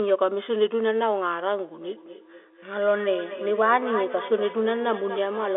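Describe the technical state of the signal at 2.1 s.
Feedback echo between two devices runs from 1.81 s to the end: one device replays the other's microphone, which picks it up again. Speech returns roughly every fifth of a second, thinner each time, peaking about 13 dB below the speech.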